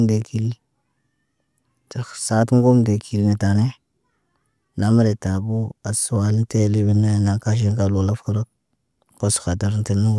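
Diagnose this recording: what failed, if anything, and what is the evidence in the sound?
Nothing failed; no fault is audible anywhere in the recording.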